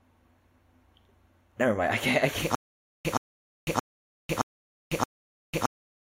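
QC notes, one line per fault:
2.55 s to the end, stutter with silent gaps. A 0.12 s burst of speech repeats five times, every 0.62 s, with 0.5 s of digital silence after each. Playback likely stalled and replayed its last fragment at each retry. The speech meant for those gaps is lost.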